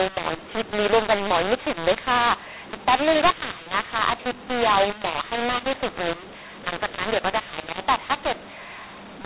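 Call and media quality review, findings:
Mu-law and A-law mixed up: harsh, level-scrambled speech across the whole clip, with pauses filled with hiss instead of silence. G.711 decoder likely reading mu-law bytes as A-law. Unlike clipping, quiet passages are also distorted, with low samples lifted well above silence. The band still stops at 4 kHz, consistent with 8 kHz telephone coding.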